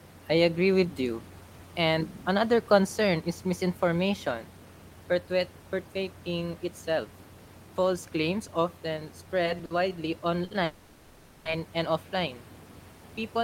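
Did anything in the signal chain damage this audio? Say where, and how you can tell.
Yes. Network stage: two short stalls from late packets, at 9.65 s and 10.45 s. Each holds the last sound for 50 ms while the jitter buffer sits empty.

A call audio freeze runs from 10.64 to 11.47 s. The last sound stretches into a fading buzz for 0.81 s, never fully silent, then resumes at "and offline". Delayed network packets likely caused it.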